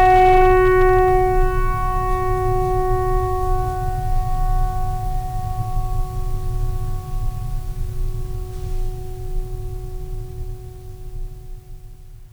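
From the start to 1.41 s the music shows hard clipping: driven about 4 dB past full scale, peaks are sheared flat, giving crackly edges rather than the rounded warmth of soft saturation.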